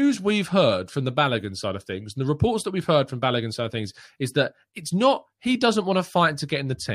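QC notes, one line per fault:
No audible faults found in this speech clip.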